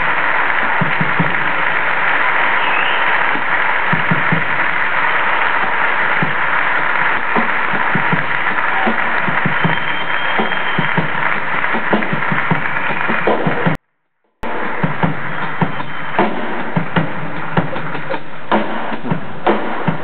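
A 24-bit alignment error (too quiet) hits the audio from 13.75 to 14.43 s. Samples stored in the low 24 bits of each 32-bit word were read as full 32-bit values. That drops the level by about 48 dB, and the sound stays clean but nearly inaudible. On a waveform this shows as an abrupt near-flat gap, and on a spectrogram as a faint band.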